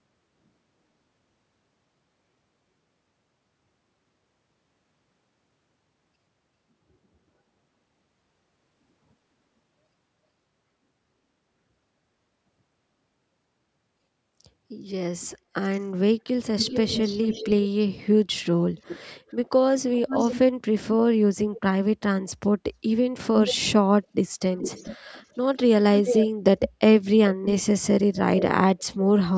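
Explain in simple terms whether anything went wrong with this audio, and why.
Yes, there's an echo leak in the second half. A delayed copy of the speech trails the speaker at 15.2 to 15.8, 16.6 to 17.5, 18.8 to 19.3, 19.9 to 20.4, 21.4 to 21.6, 24.6 to 26.7 and 27.5 to the end. The copy lags by about 0.41 to 0.44 seconds and is barely there at first, then clearly audible later. It's likely a speakerphone on one end whose echo canceller let some of its own playback slip back into the call.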